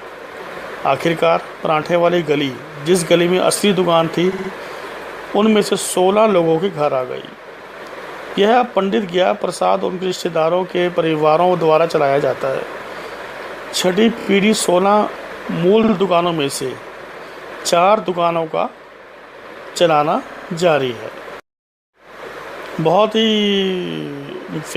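Repeated frames stutter the audio at 4.32, 14.18, 15.83 and 20.30 s: a 60, 30, 50 and 60 ms block replays three, three, two and three extra times, as duplicated compressed frames lengthen the sound by about 0.55 s overall.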